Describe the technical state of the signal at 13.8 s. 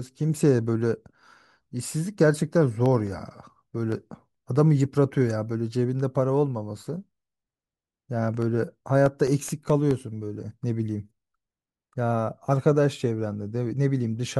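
At 13.8 s the speech signal is intact, with no technical fault present at that moment.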